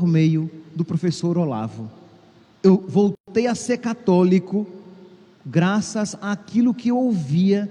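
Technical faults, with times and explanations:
3.15–3.28 s: gap at a join of encoded pieces. A silence of about 125 ms breaks the continuous sound, then the sound resumes where it left off. Separately encoded segments were joined without trimming the encoder's start delay and last-frame padding, and the codec smears the gap's edges.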